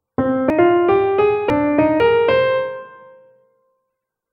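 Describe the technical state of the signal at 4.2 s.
At 4.2 s the signal is intact, with no audible fault at that moment.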